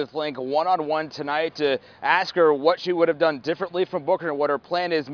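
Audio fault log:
Nothing stood out on listening.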